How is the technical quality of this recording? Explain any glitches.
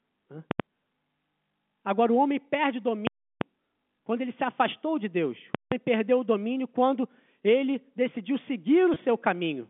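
The recording has two kinds of trouble: three loud full-scale bursts and one small dropout near the end. It comes through a telephone-band G.711 path, so nothing sits above about 3.5 kHz.

Invalid numbers at full scale show up at 0.51–0.60 s, 3.07–3.41 s and 5.55–5.72 s. Something in the processing produced infinite or invalid values, which got pinned to the maximum level for a whole block. You hear a loud pop at each edge and nothing in between. The middle one lasts about a third of a second.

Packet loss with pitch repetition happens at 8.94–8.96 s. A gap of about 20 ms, which fits a single lost packet, was patched by repeating the last pitch cycle. Because it's so short, it comes across as a brief, slightly held buzz rather than a dropout into silence.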